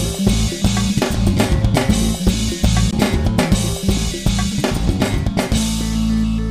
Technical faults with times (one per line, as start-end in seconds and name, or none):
2.91 CD skip